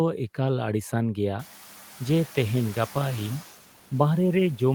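Throughout the speech, the background noise sinks between phrases and swells back under each one. These are noise suppressor artifacts: frame by frame, the suppressor lowers the bands it judges to be steady noise, here by only about 4 dB. The pumping becomes easier to hear once the room noise climbs by about 22 dB near 1.5 s, to sit about 20 dB below the speech.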